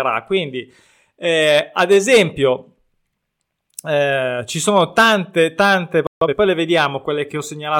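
Speech, with a playback stall just after "ci sono tante tante". At 6.07 s the sound cuts out in mid-flow. Silence holds for about 0.15 s, until 6.21 s. The player likely ran short of data or had its output thread blocked. Then the speech resumes. The gap is short but clearly audible as a break in the sentence. A time-compressed catch-up follows straight away, from 6.21 to 6.35 s. The player clears its backlog by cutting tiny slices out and cross-fading the joins. The result plays at twice normal speed. Pitch stays where it was, so it sounds hurried rather than squeaky. After 6.35 s the pace returns to normal.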